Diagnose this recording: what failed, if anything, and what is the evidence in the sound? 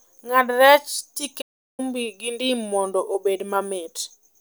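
Playback is where it broke. The speech cuts out abruptly at 1.41 s and the output sits dead silent until 1.80 s, a gap of about 0.37 s, before the sound picks up again. That's a classic playback stall: the sound stops mid-flow rather than fading, with nothing filling the hole. The likely cause is the player running dry of buffered data, or its output thread getting blocked for a moment.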